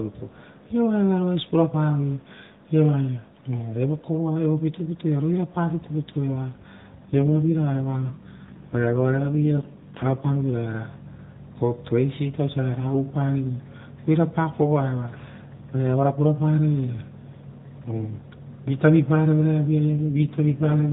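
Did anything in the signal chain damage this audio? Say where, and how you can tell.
Yes, at the network and codec stage: an AMR rate drop at 7.06–10.43 s and 19.90–20.91 s turns the speech rougher and buzzier, consistent with a step from 12.2 to 5.9 kbps. The spectrogram keeps the same 4 kHz ceiling without gaps, but the harmonics blur and smear.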